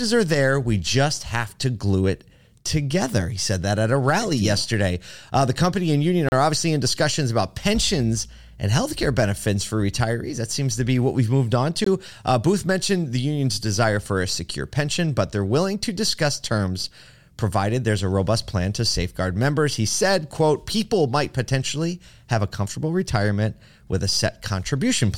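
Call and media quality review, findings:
Block of digital silence, 6.29–6.32 s (34 ms, after "the company and union") and 11.84–11.86 s (20 ms, after "what we've moved on"): abrupt dropout to silence, likely an output buffer not filled in time.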